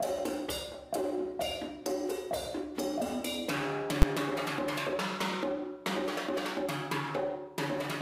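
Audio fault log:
4.02 s, invalid numbers at full scale: a calculation produced infinite or invalid values that were pinned to one extreme value for a 10 ms block, too short to separate its edge pops, so one sharp bang is heard. The waveform shows a flat-topped slab far beyond the audio's peaks, and the spectrogram shows a thin broadband vertical stripe.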